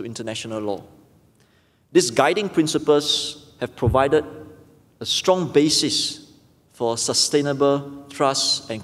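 No technical faults can be heard anywhere in this clip. Nothing in the sound calls for a timestamp or a closer look.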